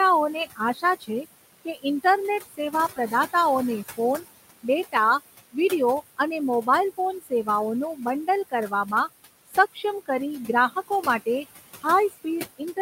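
Throughout this speech recording, the background pumps down between phrases and swells back under the talker. These are noise suppressor artifacts: frame-by-frame gain cuts of about 17 dB in bands judged to be steady noise, applied to a room noise bed sitting about 13 dB below the speech. Soft consonants and word endings also sound swallowed at 0.34–3.34 s, 3.97–4.95 s, 6.17–8.92 s, 9.47–11.27 s and from 11.82 s to the end. This is speech cut by the noise suppressor, which mistook quiet speech for noise and dropped it by up to about 19 dB. The losses add up to roughly half a second in the first stretch, about 0.1 s in the second, and about 0.3 s each in the third and fourth.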